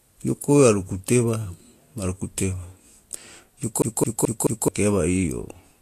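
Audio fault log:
throughout — Vorbis compression: grainy, hissy treble with blurred attacks and nothing above 14.2 kHz, likely low-bitrate Vorbis (around 38 kbps) coarsely quantising fine spectral detail into noise.
3.82–4.68 s — CD stuck on one turn: the same 0.22 s of speech plays four times, with a short mute at each jump as the laser falls back one track.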